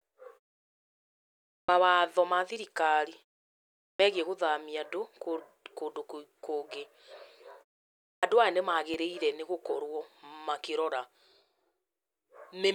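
At 1.64 s, 3.95 s and 8.18 s, speech resumes abruptly out of silence with its opening sound missing, roughly 45 ms shaved off each time. These are clipped starts after a pause: the output device drops into a low-power state during the silences before them (1.33 s, 0.79 s and 0.62 s long) and needs a moment to wake or relock, swallowing the first sound.

At 8.94 s a brief tick sounds, a block of digital silence lasting about 2.9 ms, which points to one 128-sample buffer left unfilled. The signal drops straight to silence and returns without any fade, and those hard edges produce the click rather than an audible hole.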